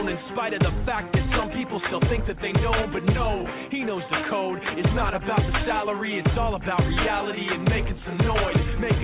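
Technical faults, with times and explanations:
Nothing stood out on listening, with the audio simply carrying the narrow band of a telephone-style call path that stops at about 4 kHz, as expected from G.711 mu-law at 64 kbps.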